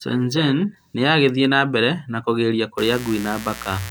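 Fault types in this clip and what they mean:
Mains buzz: from 2.78 s to the end of the speech clip at 3.90 s, a steady, raspy buzz sits roughly 15 dB below the speech. Sharp switching spikes leak into the signal twice per mains cycle, so with 60 Hz mains the pulses repeat 120 times a second. Their steep edges spread energy across 60 Hz harmonics reaching several kHz, which makes the tone rasp rather than hum.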